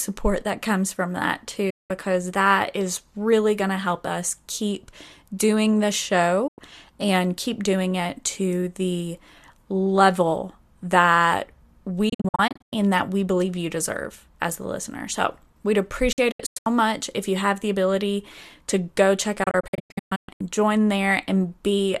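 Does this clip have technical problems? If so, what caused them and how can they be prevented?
Yes. The speech has digital broadcast dropouts, where the receiver lost the signal or rejected corrupted frames and muted with a quick 8 ms fade until good frames returned. There are single gaps at 1.70–1.91 s and 6.47–6.59 s, and clusters of short holes at 12.09–12.73 s before "and that we believe", at 16.12–16.67 s before "much if you have", and at 19.43–20.41 s after "ability to go check". The audio in those gaps is lost. Prevention requires a stronger, steadier received signal through better antenna placement or gain.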